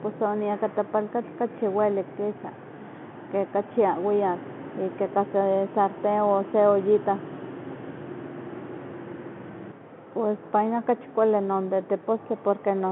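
No technical faults can be heard in this speech clip. It carries the sound of G.711 telephone coding, with the speech confined to a narrow line band of roughly 200 Hz to 3.4 kHz, nothing above about 3.8 kHz, and at most a faint trace of coding noise that follows the level of the speech.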